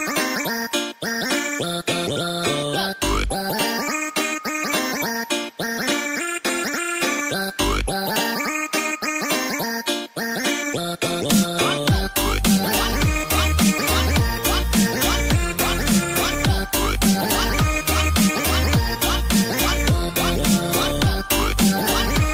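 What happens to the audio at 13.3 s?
Nothing goes wrong at 13.3 s; the audio plays through that moment intact, with no dropout, click or distortion.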